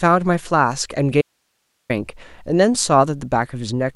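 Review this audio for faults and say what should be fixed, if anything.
Audio dropout to a faint residue from 1.21 to 1.90 s: the speech cuts abruptly for about 0.68 s, leaving only hiss roughly 50 dB down, likely a brief signal-path interruption. Check cables, connectors and the interface link so the feed can't drop mid-take.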